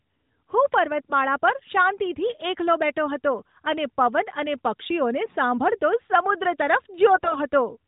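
AMR bit errors strike the speech at 1.02 to 1.12 s, 5.26 to 5.35 s and 7.12 to 7.39 s, over the band-limited, lightly coded narrowband mobile sound. On a weak link, the less protected bits of each frame arrive corrupted while the core bits still check out, so the excitation pulses and fine pitch, gain and spectral values go astray. Pitch and level hold roughly, but those moments turn hoarse and gargly. The last burst is longer and milder.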